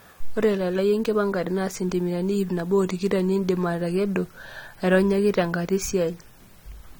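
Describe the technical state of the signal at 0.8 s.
At 0.8 s the speech carries AAC compression damage that spans the whole clip, likely from AAC-LC coding at a rate fitting 32 kbps. Coarse quantisation of spectral lines leaves sibilants and sustained sounds plainly smeared and warbly, with nothing above 19.1 kHz.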